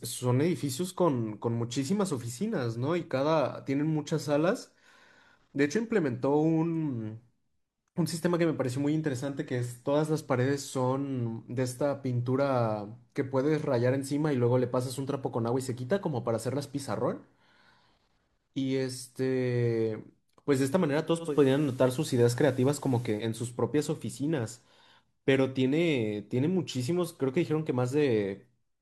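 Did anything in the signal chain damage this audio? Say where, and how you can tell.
Yes. Between 21.18 and 23.28 s the speech shows digital radio blending to analogue, a fault at the receiver stage rather than in the recording itself. The hybrid receiver lost its digital stream and cross-faded over about 219 ms to the station's FM broadcast, then back. Level shifts by about 2 dB, and FM hiss rises to roughly 30 dB below the speech. A spectrogram shows a broadband noise floor lifting for that span, and the waveform shows a small step in amplitude at each blend.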